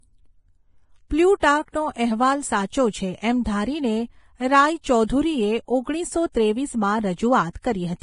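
Heavy lossy encoding, likely Vorbis compression at a low quality setting, runs through the whole of this speech. The encoder has discarded everything above 10.6 kHz and quantised the remaining treble so coarsely that its fine structure has been swapped for noise of similar energy. The result is a steady hiss and graininess over the voice, with roughened tone and softened consonant onsets, damage that points to a bitrate somewhere around 28 kbps.

Pre-echo occurs twice, where a sharp onset landed late in a transform block and the quantisation noise sized for that loud moment spilled back into the quiet just before it. From 1.40 to 1.42 s, a smear of about 25 ms precedes the attack, and from 7.53 to 7.55 s, another of about 23 ms does the same. Each is heard as a brief hiss running ahead of the onset, leaving the attack blurred rather than crisp.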